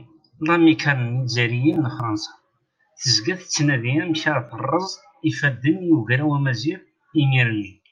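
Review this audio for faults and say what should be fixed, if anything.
The speech skips briefly at 2.00 s and 4.49 s, losing a few milliseconds each time. The two sides join with no gap. The 2.5 s spacing points to audio missing between chunks, likely from the recorder dropping samples at each chunk boundary. Buffering continuously across chunk changes would prevent this.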